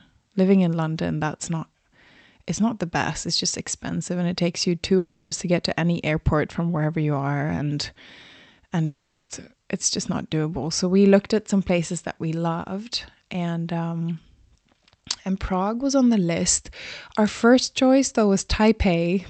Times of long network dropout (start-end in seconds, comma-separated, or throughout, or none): 4.97-5.33, 8.85-9.31